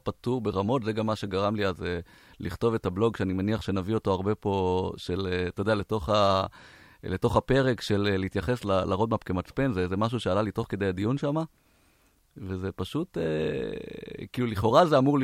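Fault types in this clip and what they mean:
No faults detected in this clip.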